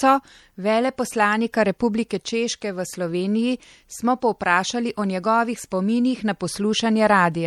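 From start to end, the speech sounds watery and swirly, with chirpy s sounds. This is likely MP3 compression at a low bitrate, near 64 kbps. Starved of bits, the encoder drops weak frequency lines that flicker between frames.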